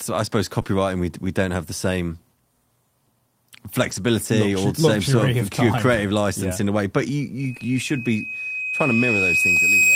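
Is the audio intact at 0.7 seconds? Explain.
No, not quite. Just before "we we don't have", from 0.61 to 0.67 s, a brief smear breaks the speech. This is short concealed packet loss: about 40 ms never arrived in time, so the receiver stretched the preceding sound over the gap before blending back.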